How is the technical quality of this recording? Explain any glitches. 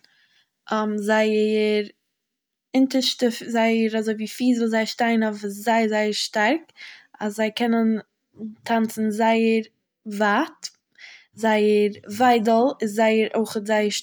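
Nothing stood out as a technical problem on listening to this speech recording, so there are no glitches to explain.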